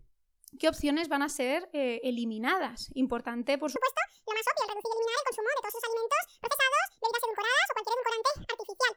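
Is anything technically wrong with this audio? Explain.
Yes. Section at the wrong speed, from 3.76 s to the end: likely clocked 1.85 times too fast, so the speech turns hurried and jumps nearly an octave higher in pitch.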